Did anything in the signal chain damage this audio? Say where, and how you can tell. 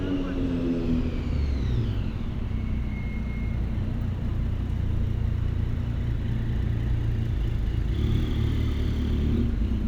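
No, nothing along the chain has left a mark on these everyday sounds that I can hear, from the wiring and converter through to storage and playback.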